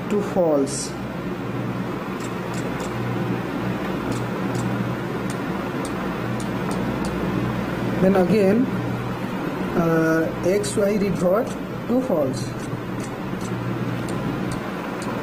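From 8.74 s to 13.53 s there is a call bitrate drop. The connection's bandwidth estimate fell and the encoder was forced to spend far fewer bits, coding the signal much more coarsely and trimming the top end. For about 4.7 s the audio turns rough, watery and muffled, which fits a fall from around 96 kbps to around 16 kbps, before the bitrate recovers and the full bandwidth returns.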